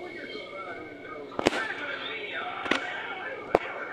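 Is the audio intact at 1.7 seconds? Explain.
Yes, the audio is intact at 1.7 seconds, with no dropout, click, distortion or other fault at that point.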